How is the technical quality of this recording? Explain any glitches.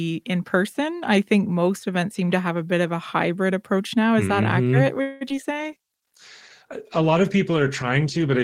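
The recording has three call-related glitches clustered just after the five-second mark, and the last one lasts until the end.

At 5.01 to 5.23 s there is a call audio freeze: the last sound stretches into a fading buzz or hiss for about 195 ms, then resumes where it stopped. The likely cause is held-up packets draining the jitter buffer, so a gap is inserted but nothing is lost.

At 5.29 to 5.32 s, short concealed packet loss causes a brief smear or wobble. About 20 ms never reached the decoder, and the receiver patched the hole by extending the preceding sound before blending back.

From 5.52 s to the end, a call bitrate drop turns the sound coarser, rough, watery or muffled, as the encoder falls from 32 to 13 kbps and sheds high frequencies. It never recovers.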